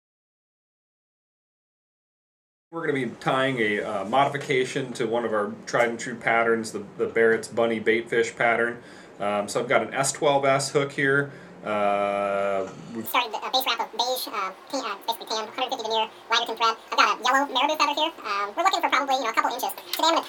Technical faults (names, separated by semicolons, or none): audio read two samples at a time (double speed)